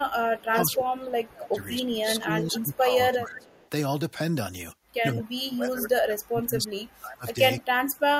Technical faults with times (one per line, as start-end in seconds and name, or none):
0.39-0.75 echo leak
0.77-3.49 speech suppressed in double talk
2.54-2.77 echo leak
3.37-3.69 echo leak
5.14-7.39 speech suppressed in double talk
7.88-8.19 speech suppressed in double talk